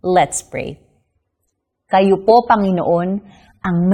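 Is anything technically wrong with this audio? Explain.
Yes. From 1.04 s to the end, the speech shows an adaptive stream at a lower bitrate: the player switched to a leaner encoding, which fits a move from about 96 to 27 kbit/s AAC. Treble vanishes above 12.5 kHz and codec artefacts thicken. Unlike a rebuffer, the switch is abrupt but leaves no gap.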